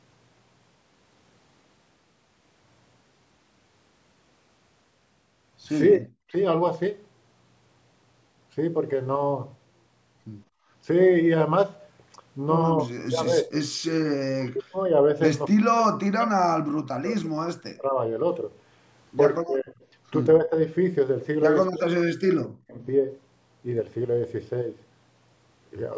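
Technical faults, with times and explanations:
5.95–6.34 s, 12.86–13.52 s, 14.1–14.84 s, 15.49–17.97 s, 19.41–19.75 s, 20.38–20.57 s and 21.67–22.82 s: speech suppressed in double talk. The speech dips or breaks into pieces, by up to roughly 40 dB, likely because the echo canceller took overlapping far-end talk for echo and turned both down.
10.48–10.68 s: background gated by the echo canceller. The room sound ducks by about 20 dB for a moment while the loudspeaker plays, then comes back once the canceller releases its hold on the microphone.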